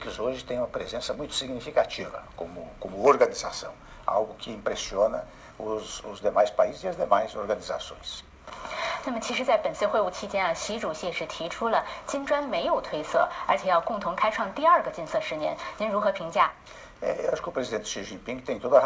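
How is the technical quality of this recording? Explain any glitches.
The recording has a persistent timing fault, with small, uneven hiccups from start to finish. The audio stops cleanly at 8 kHz, which fits a wideband call codec such as G.722 at 64 kbps.

Clock drift between sender and receiver runs through the whole clip. The sender's clock runs roughly four percent fast, so the receiver's jitter buffer keeps overfilling. Unlike network jitter, which causes random gaps and stretches, the drift pushes steadily in one direction and never makes the buffer run dry.

Repeated timing corrections come from 0.45 s to 18.68 s. To keep up with the buffer, the receiver cuts short pieces out of the audio, which adds up to a playback pace of about 104%. Each cut is a slight skip or stumble in tempo, and the spacing between them is uneven. Packet loss would instead leave dropouts or smeared patches.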